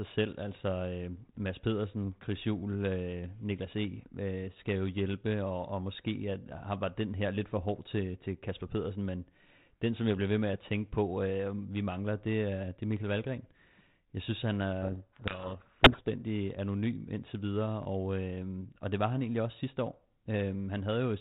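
Speech, passed through G.726 ADPCM with light coding damage that fits 32 kbit/s and no content above 4 kHz. From 14.82 to 16.22 s, after "synes han", the speech is buried in harsh distortion until "anonym indtil videre og". This is a codec payload misread. The decoder takes the G.726 code words with their bits in the wrong order, so each sample difference is decoded wrongly.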